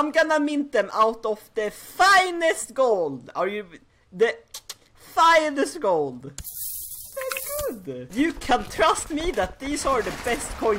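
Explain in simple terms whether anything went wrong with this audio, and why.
Nothing went wrong with this audio on the technical side, as there are no dropouts, glitches or other problems anywhere in it.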